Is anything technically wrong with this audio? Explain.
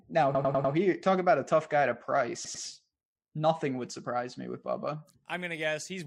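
Yes. Two stutters from repeated frames: at 0.35–0.74 s, just before "talk about a tough", a roughly 109 ms block replays four extra times; at 2.44–2.63 s, after "a tough guy to", an 89 ms block replays twice. The decoder received the same compressed frames more than once.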